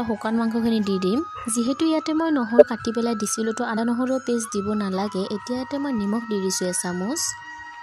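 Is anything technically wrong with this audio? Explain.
Yes. Compressed frames are skipped twice, at 2.58–2.63 s and at 3.76 s. At each point, whole frames of the encoded stream were never played, either because they were missing or because the decoder rejected them as corrupt. Playback therefore jumps forward by about 50 ms of audio each time, a brief hiccup in continuity.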